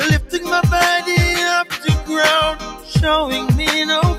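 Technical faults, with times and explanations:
Throughout: noise suppressor applied to music or sounds. A speech-tuned suppressor stayed active and keeps mistaking sustained material and ambience for noise, so the level swings by about 5 dB. Onsets punch through fine, but held parts and tails get pulled down, giving a pumping, thinned-out feel.
1.64 to 1.87 s and 2.56 to 2.93 s: sound cut by the noise suppressor. In these two stretches the suppressor clamps down harder, dropping the sound by up to about 10 dB, roughly a fifth of a second and then about 0.4 s. Steady or decaying parts sink or get their tails cut short.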